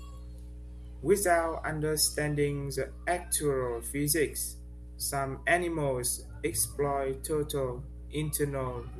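Mains hum runs through the whole recording, a steady 60 Hz tone sitting underneath the speech from start to finish. Power-line current has leaked into the signal path, most plausibly through a ground loop between connected equipment or from a transformer close to the cabling. The hum is strong, about 15 dB below the speech, so it stays audible even while someone is talking and becomes an obvious low drone in every pause.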